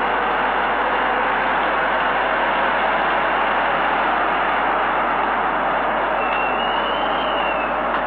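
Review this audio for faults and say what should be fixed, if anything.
Mains hum runs through the whole clip as a steady low tone at 50 Hz, sitting roughly 25 dB below the sound itself. The power line is coupling into the signal path, most likely through a ground loop or a nearby transformer. Unlike handling noise or wind rumble, the tone never varies: its pitch stays locked at 50 Hz and its level holds constant whatever the sound does. To prevent it, keep all equipment on a shared ground and route cables away from power supplies.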